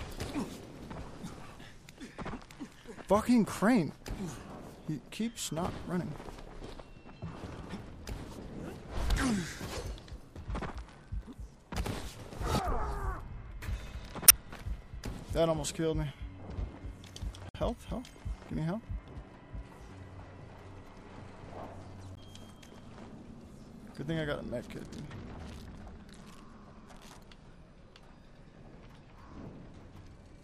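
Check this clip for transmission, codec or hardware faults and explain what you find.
Three short faults are present, all damaged data in a compressed stream. They fall at 14.25 to 14.32 s, 17.49 to 17.56 s and 22.14 to 22.18 s. Corrupted bytes break the decoder's frame sync. It misreads frames and hunts for the next header. Each event is a brief chirp or blip.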